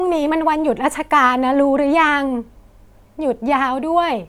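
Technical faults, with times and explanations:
Nothing technical to flag here; the speech comes through with no faults that stand out to the ear.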